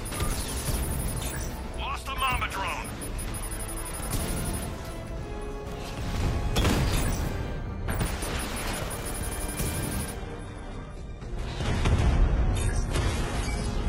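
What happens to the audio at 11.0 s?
At 11.0 s the sound is dull, with nothing above 11.8 kHz and more smeared, watery codec artefacts. The change arrives abruptly at 10.17 s with no gap and lasts to the end of the clip. This is an adaptive stream at a lower bitrate: the connection slowed and the player switched to a leaner encode, which fits a drop from about 96 kbit/s AAC to a 16 kbit/s HE-AAC stream.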